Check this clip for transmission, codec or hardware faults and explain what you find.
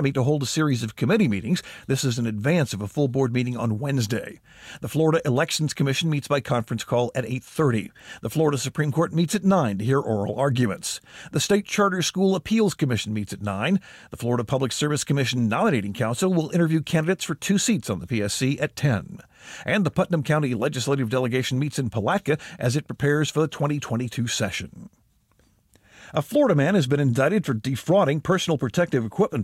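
Sample clock jitter runs through the whole of this speech clip. A fine hiss and grainy roughness ride on top of the voiced sound, growing on louder passages and on bright, high-frequency consonants, then disappearing in the pauses. The converter's clock is wandering by something under a microsecond, so each sample lands a little early or late. On steep parts of the waveform that timing error becomes an amplitude error, sitting roughly 45 dB below the signal.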